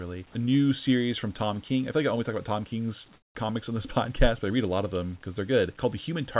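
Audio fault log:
3.14–3.35 s, comfort noise in place of the background: for about 0.21 s just before "comics on this", the real room background, already about 34 dB below the loudest speech, gives way to a flat, featureless hiss roughly 7 dB quieter. The likely cause is discontinuous transmission: the sender stopped sending during the pause and the receiver filled the gap with synthetic noise of a similar rough shape. The whole clip has nothing above 4 kHz, which fits narrowband telephone coding.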